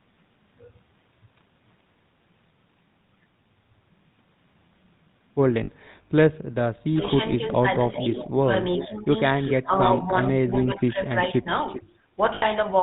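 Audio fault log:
Throughout: GSM full-rate codec. The audio has a plainly buzzy, gravelly grain and nothing above 4 kHz, which fits 13 kbps full-rate GSM. The pulse-driven vocal-tract model shows on a spectrogram as a hard ceiling at 4 kHz and smeared, coarse harmonics.
5.64 to 5.70 s and 12.34 to 12.45 s: lost GSM frames. For 40 ms, then 80 ms, the last good sound is held as a rough metallic ring, which fits two and then four missing 20 ms frames. A spectrogram shows frozen, repeated bands.
6.93 to 9.09 s and 9.53 to 11.51 s: speech suppressed in double talk. The talker dips by up to about 10 dB, then about 15 dB, in patches adding up to about a second in each span. This is likely an echo canceller ducking during overlap. The waveform shows gouged, uneven envelope drops.
7.74, 8.79, 9.46, 10.22 and 11.67 s: echo leak. Delayed copies of the voice arrive 394 ms late, about 10 dB down in the first three and about 15 dB down in the last two, lasting from 0.05 to 0.59 s. 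They likely come from loudspeaker pickup that was not fully cancelled, and show as faint, shifted repeats of earlier patterns.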